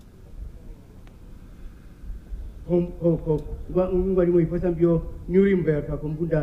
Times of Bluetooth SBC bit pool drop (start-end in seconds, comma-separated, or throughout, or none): none